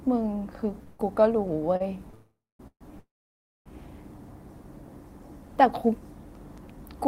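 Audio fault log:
0.83–2.15 s, repeated stalls (stutter): the sound catches and drags in five brief holds, about 18% of the span, the longest 157 ms. Each hold stretches the last sound while the jitter buffer refills, so nothing is lost, unlike a dropout.
2.15–2.61 s, 2.67–2.83 s, 2.99–3.68 s, call audio freeze: three single longer holds, not a string of short catches. The last sound buzzes, then fades to silence for about 240 ms, 80 ms and 590 ms. The sound then resumes where it stopped, likely after packets were held up in transit.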